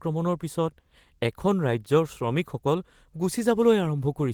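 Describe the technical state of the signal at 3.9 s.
At 3.9 s the speech signal is intact, with no audible technical fault at that moment.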